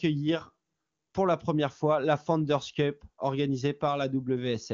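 The speech has no technical faults, only the band-limited sound of an AMR wideband (HD Voice) codec running at a high rate, with nothing above about 7 kHz.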